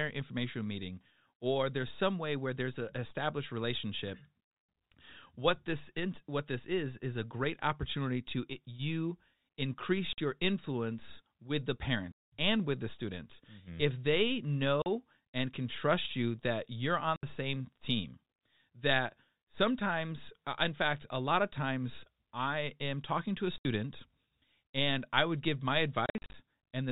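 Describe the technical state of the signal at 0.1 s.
At 0.1 s the speech is intact, carried in the ordinary narrow telephone band of G.711 coding with nothing going wrong at that moment.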